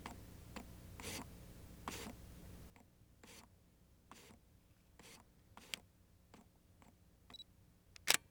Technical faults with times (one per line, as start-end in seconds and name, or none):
2.70-8.31 sudden gain jump